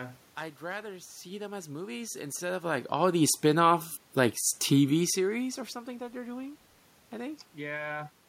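Nothing in the signal chain of this speech recording is at fault: the background noise belongs to the room where the microphone sits, and the changes in level around 2 s and again around 5 s come from the talker moving relative to the microphone.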